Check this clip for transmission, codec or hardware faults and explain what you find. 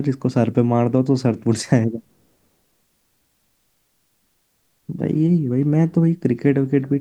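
Nothing turns up here: the speech comes across steady and intact, with no glitches, dropouts or damage from the transmission chain or the equipment to point to.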